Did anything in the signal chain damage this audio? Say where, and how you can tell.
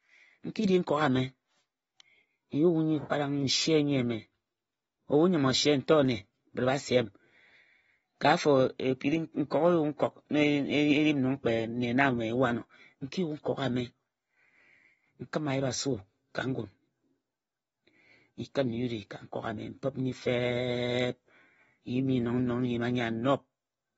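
Yes. AAC compression damage runs through the whole speech clip, at the codec stage. Nothing reaches above 7.6 kHz, and the dull, smeared top end is plainly audible. This points to AAC-LC at a low bitrate, likely around 24 kbps, with high bands discarded to save bits.

Pre-echo at 9.50 s, also from the codec: a brief hiss, about 15 ms long, comes just ahead of a sharp onset. The transform block spread its quantisation noise across its full length, so noise meant for the loud attack leaked into the quiet moment before it.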